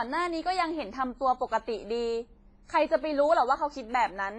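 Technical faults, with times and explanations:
Throughout, WMA compression: a low-bitrate transform codec, likely at about 24 kbps, quantised the speech heavily over long blocks, smearing noise in time and dropping weak spectral lines, so it rings and sounds washy, with breathing hiss and nothing above 10.6 kHz.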